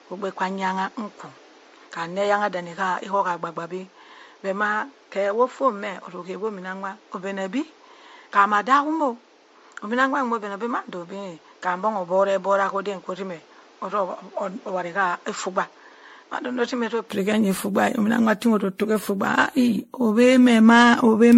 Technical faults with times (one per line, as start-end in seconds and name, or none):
0.00-21.38 generation loss
0.00-17.10 input switched to a poorer device